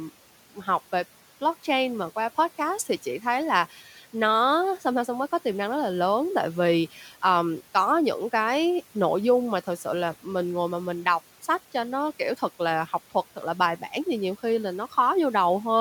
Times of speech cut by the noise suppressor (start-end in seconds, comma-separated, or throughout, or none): 3.70-4.14, 6.94-7.12